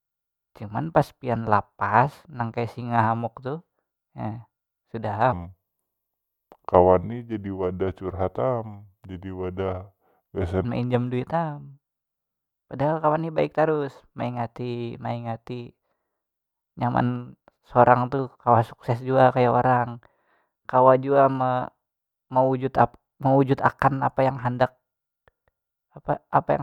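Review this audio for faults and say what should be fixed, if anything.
From 5.33 s to 10.65 s the speech turns deep and drawn out, running at 0.768 times its proper speed, with the pitch sinking about five semitones along with it. This section at the wrong speed likely comes from that stretch being played or resampled against a mismatched clock. To prevent it, check that every edited segment is conformed to the project's sample rate before rendering.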